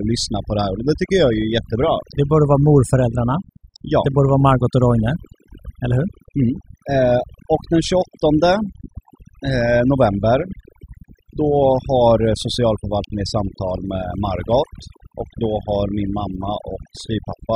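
A speech recording carrying overdone noise removal from start to finish. The denoiser was pushed so hard that bands near its noise estimate are pulled down to nothing, leaving a lowered background flecked with chirpy artefacts and a voice with its softer detail stripped away.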